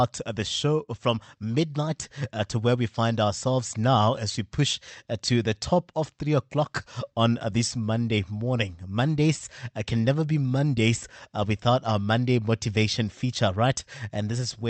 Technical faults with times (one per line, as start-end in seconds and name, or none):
none